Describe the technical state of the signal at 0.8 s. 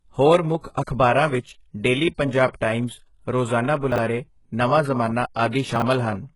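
A transform codec has smeared its quantisation noise backwards in time, causing pre-echo from 0.84 to 0.87 s. A sharp attack falls late in a coding block, and the noise budget set for that loud onset also covers the quiet stretch ahead of it. About 34 ms before the attack, a short hiss rises out of the silence, and the onset itself loses its edge and sounds soft and smeared rather than crisp.

Underneath that moment, and throughout the speech, the treble is being rebuilt instead of carried, likely by HE-AAC compression at a very low rate that fits something near 12 kbps. Only the lower spectrum is truly coded, and the upper bands are copied up from below and shaped by a coarse envelope, with nothing above 11.4 kHz. The result is heavy codec damage. The top end is synthetic, and its harmonics don't line up with those below, so s sounds come out gritty and metallic.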